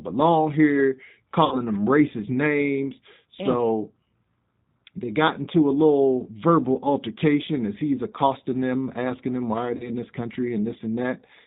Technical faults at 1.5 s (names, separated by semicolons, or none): G.729 codec; VoIP packet loss concealed by the speech codec